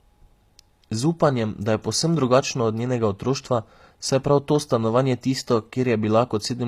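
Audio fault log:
Throughout: HE-AAC compression. The treble of the speech is bright but sounds synthetic, and s sounds come out gritty and lispy with a metallic edge. The upper band is likely rebuilt by spectral band replication: lower-frequency content is copied upward and shaped by a coarse envelope, so the high harmonics do not line up with those below the crossover. The plainly audible damage fits a low bitrate of around 24 kbps.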